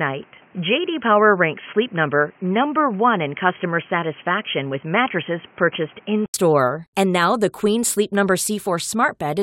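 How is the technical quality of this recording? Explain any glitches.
The recording has one clear fault. From the start until 6.34 s, it sounds like the input switched to a poorer device. That is the likely cause. Nothing reaches above 3.2 kHz in that stretch, so the speech sounds dull and boxy. A background noise sits about 30 dB below the speech. The level barely changes. At 6.34 s there is an 80 ms gap of silence. After it, the full bandwidth returns and the sound opens up.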